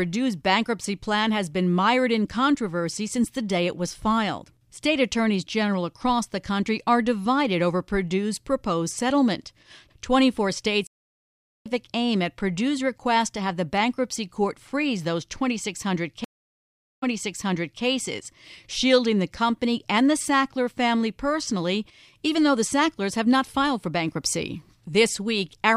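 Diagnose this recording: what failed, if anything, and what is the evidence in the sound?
Network stage, stream reconnect: 0.78 s silences at 10.87 s (jumping about a second ahead to "aim at") and 16.24 s (replaying 0.81 s), each restarting decoding mid-stream.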